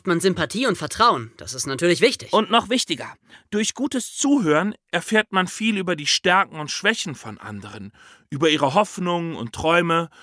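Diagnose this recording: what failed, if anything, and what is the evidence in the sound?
Wrong sample rate at the playback stage: from 4.26 s, after "noch wichtiger durch gutes", speech slows to 0.92 speed and drops 1.5 semitones, consistent with 24 kHz audio played at 22 kHz.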